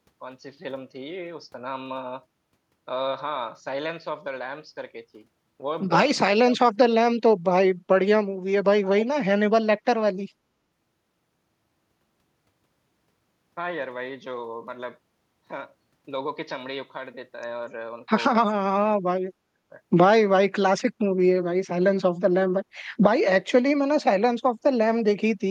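From 6.27 to 6.81 s, the speech drops out sharply. It falls by something like 35 dB, then recovers. A second, shorter dip follows from 7.01 to 7.16 s. This is speech suppressed in double talk. Both sides were likely talking at once. The echo canceller could not tell this talker from the loudspeaker echo. It turned everything down together. At 18.41 s it happens again, for longer, until 19.71 s. That drop is deeper still, around 40 dB.

Between 8.85 and 9.06 s, a faint delayed copy of the speech appears. It trails the original by 245 ms. It sits roughly 15 dB below the speech. This is echo leak. The far end is likely playing the call over a loudspeaker. Its echo canceller missed part of what its microphone picked up. That residue was sent back as a short scrap of echo.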